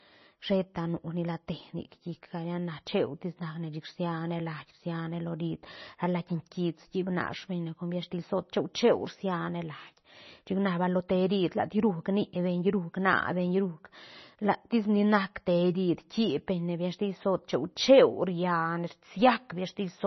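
Throughout, heavy MP3 compression, likely near 24 kbps, makes the speech watery and swirly. A spectrogram shows nothing above 6 kHz, with flickering holes.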